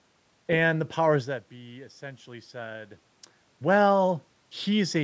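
No technical faults are audible.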